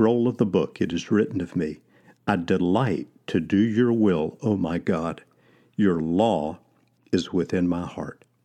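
Speech recording, no technical faults heard anywhere in the clip.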